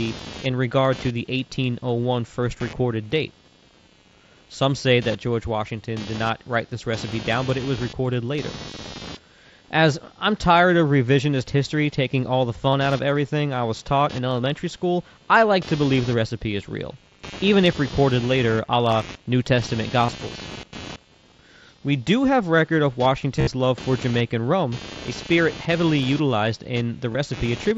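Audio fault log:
throughout, computer activity noise: a buzzing, scratchy layer pulsing at around 200 Hz and roughly 20 dB below the speech. Processor and peripheral load shifts the shared audio ground. On a spectrogram it appears as a harmonic comb of faint stripes whose strength follows computer load rather than the voice.
12.69 to 12.74 s, 20.06 s, 23.37 to 23.47 s, 27.12 s, concealed Bluetooth headset packet loss: each lost headset packet is filled by repeating the closest match from the last 20 milliseconds or so of speech. The gaps are 37.5 ms between "history taking all the" and "out of everything I", 22.5 ms at 20.06 s, and 22.5 ms after "a spirit heavily utilized", which fits lengths of 7.5 ms frames. The worst is 82.5 ms scattered over 105 ms between "do have record of" and "love for", with a 60 ms run. That run sounds like a buzzy held tone with a warble at recovery. In the waveform it appears as a short stretch of identical repeating cycles at steady amplitude, and the spectrogram shows flat horizontal partials before the speech resumes. 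The mSBC headset link carrying the speech keeps its usual 8 kHz ceiling.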